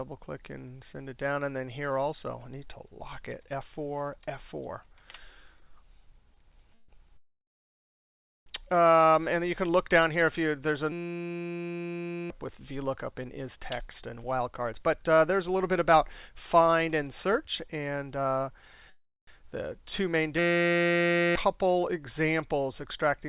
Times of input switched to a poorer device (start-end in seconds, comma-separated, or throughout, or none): none